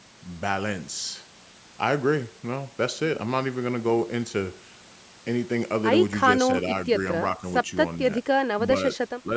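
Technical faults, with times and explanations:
9.23 to 9.32 s, speech suppressed in double talk: right at the end of the clip the speech briefly sinks by a few decibels, about 5 dB at its lowest, for roughly a tenth of a second, then recovers. The likely cause is an echo canceller that heard both ends talking together, could not tell this talker apart from the loudspeaker echo, and pulled the level down on both rather than let echo through.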